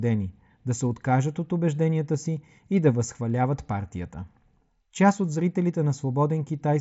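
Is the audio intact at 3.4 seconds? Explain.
Yes, the audio is intact at 3.4 seconds, with the speech carried through the Bluetooth mSBC headset codec as normal and its band stopping around 7.7 kHz, as that path does.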